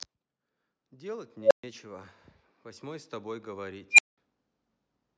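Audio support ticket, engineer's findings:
Unstable filter in speech path, 1.41–1.64 s and 3.91–4.18 s. Tone near 500 Hz, then near 2 kHz, swells over about 98 ms / 77 ms to clipping, then 128 ms / 192 ms silence. Recursive stage diverging until overflow and reset. Spectrogram: brightening horizontal line, then blank gap. Waveform: exponential envelope, flat-topped, then silence.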